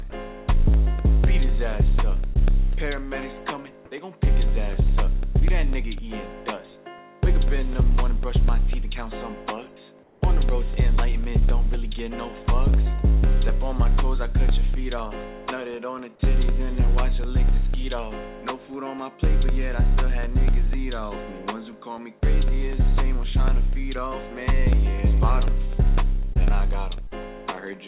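At 0.10 to 0.12 s, about 20 ms of sound gives way to a flat patch of steady noise, likely sound dropped by the voice detector, which treated the sound as background. On a spectrogram, the detailed signal is briefly replaced by a smooth, uniform noise band.

From 0.24 s to the end, periodic USB or driver dropouts cut a sliver of audio every 0.25 s and fill it with silence. These are heard as a regular ticking that sounds only while there is signal. The waveform shows evenly spaced brief gaps, and the spectrogram shows thin vertical lines spanning the whole band, which stops at 4 kHz, as expected for G.711 mu-law at 64 kbps.

At 2.34 s, a short concealed packet loss covers about 20 ms that never arrived. The receiver extended the preceding sound to bridge the hole, producing a brief smear or wobble. The spectrogram shows a short stretch of repeated, blurred texture instead of fresh detail.

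At 10.03 to 10.21 s, the real background is swapped for comfort noise in place of the background for 180 ms, about 4 dB quieter and featureless. This is likely from discontinuous transmission during a pause. On the spectrogram, a smooth, slightly darker noise block interrupts the textured floor.

Further short concealed packet losses occur at 26.33 s (about 20 ms) and 27.07 s (about 40 ms), each heard as a quick wobble. The longer one shows a visible stretch of smeared, repeated spectral pattern before the real audio blends back in.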